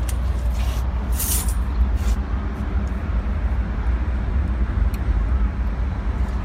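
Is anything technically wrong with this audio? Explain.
No, nothing technically wrong can be heard in this audio. No problem shows up at any point in the clip.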